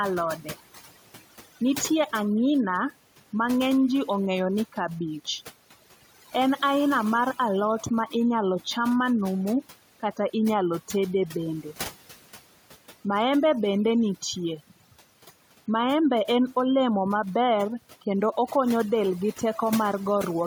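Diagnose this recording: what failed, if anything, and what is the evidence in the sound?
The call processing stage is at fault: overdone noise removal, running through the whole clip. The background between phrases drops away and breaks up into little twinkling specks. The suppressor is clamping individual frequency bands whenever they sit close to its noise estimate, and that's far too aggressive here, given the room noise is only about 22 dB below the speech. Quieter parts of the voice get swallowed along with the noise.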